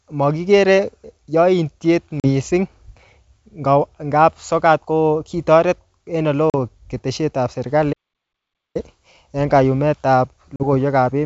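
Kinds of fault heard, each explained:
Packet loss on an ADPCM call: three 40 ms holes near 2.2, 6.5 and 10.6 s, each a sharp-edged blank stripe, after which the sound briefly returns distorted while the decoder resettles.
Playback stall: the sound stops mid-flow for about 0.82 s from 7.92 s, a flat waveform and empty spectrogram, likely because the player ran short of data.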